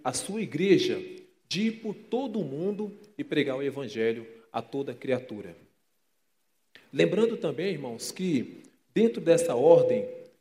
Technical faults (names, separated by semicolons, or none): none